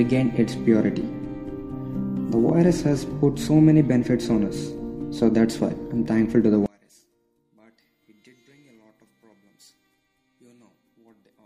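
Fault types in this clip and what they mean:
One channel inverted: from 6.66 s the sound falls about 36 dB to a faint residue, likely polarity cancellation in mono, not a dropout's silence.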